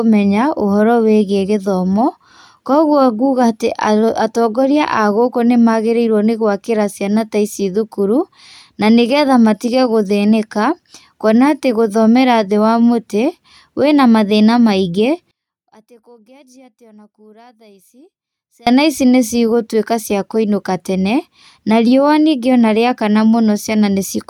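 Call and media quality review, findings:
15.31–18.67 s: speech drops about 31 dB to a faint residue; waveform near-flat. Likely one channel inverted, cancelling in the mono sum.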